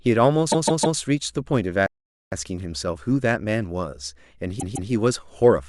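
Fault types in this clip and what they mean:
Repeated frames: a stutter where the same 0.16 s block of speech plays again, three extra times from 0.51 to 0.98 s and twice more from 4.59 to 4.90 s. Compressed frames were sent more than once, adding about 0.47 s and 0.31 s.
Playback stall: the speech stops dead mid-flow and the output goes silent for about 0.46 s, from 1.86 to 2.32 s. The likely cause is the player running out of data or its thread being blocked until it recovered.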